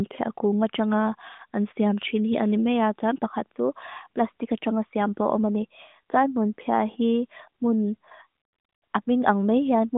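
No technical faults are audible in this speech.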